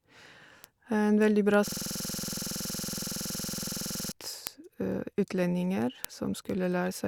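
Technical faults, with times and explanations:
0.19 to 6.94 s, word clock ticks: sharp clicks of uneven strength recur roughly every 0.2 s, around thirty in all. A receiver clock drifting about 100 ppm from the sender's slips one sample per crossing. Unlike dropouts, nothing audibly goes missing between ticks.
1.68 to 4.12 s, system hang loop: the speech freezes into one 46.44 ms fragment repeated 53 times at 21.5 Hz, which fits a 2048-sample buffer cycling while the driver hung. It sounds like a rough, buzzy stutter, not isolated clicks, and the speech does not advance.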